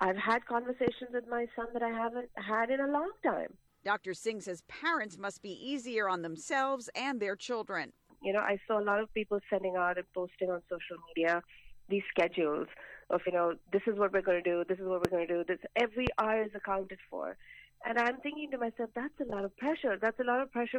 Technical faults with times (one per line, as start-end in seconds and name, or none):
0.88-0.90 loud pop
13.26 compressed frames skipped
15.05-15.07 loud pop
16.07-16.09 loud pop